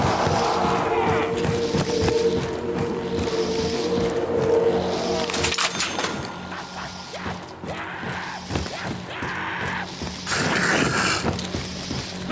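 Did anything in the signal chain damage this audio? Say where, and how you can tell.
Yes. Gain pumping runs through the whole clip: the level ducks by about 5 dB as each loud sound arrives, so loud and soft passages sit unnaturally close in level. The likely cause is input gain set far too high for the microphone, with a fast limiter or compressor clamping it on every peak. On a waveform the envelope looks flattened. A spectrogram shows nothing above the 8 kHz ceiling left by the call processing.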